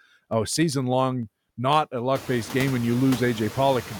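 From 0.13 s to 1.93 s, just before "a luck based game", there's a steady run of periodic USB or driver dropouts: tiny ticks every 0.1 s, about twenty of them. Each one skips a sliver of audio, a fraction of a millisecond, as if something stalls the bus on a timer.

Throughout the clip you can hear noise suppressor artifacts. The suppressor is pulling the steady background down by about 15 dB, frame by frame, so the noise floor dips in the gaps and pumps back up under the speech. The room noise swells by around 20 dB near 2 s, still about 17 dB under the speech.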